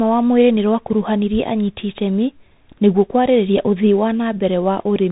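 From start to finish, the speech has passed through a Bluetooth CVSD headset codec, which encodes the signal one bit per sample as a simple up-or-down step whose size adapts, at a rate that fits a 64 kbps link. Nothing above about 3.8 kHz survives, so the speech sounds narrow and muffled. Loud high-frequency sounds outrun the adaptive step and distort, s sounds come out scratchy, and a granular hiss sits plainly under the speech throughout.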